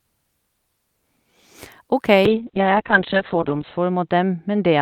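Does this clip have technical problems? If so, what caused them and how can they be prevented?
Yes. A call bitrate drop starts at 2.27 s and lasts to the end. The encoder falls from 48 to 6 kbps, bottoming out for about 1.5 s, and the bandwidth narrows from 20 kHz to 4 kHz, so the speech turns muffled and watery. Unlike packet loss, there are no gaps. Reserving steady bandwidth or setting a higher minimum encoder bitrate would prevent it.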